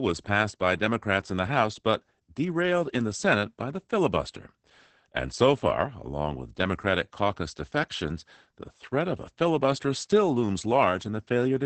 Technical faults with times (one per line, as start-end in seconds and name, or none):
0.00-11.66 Opus voice compression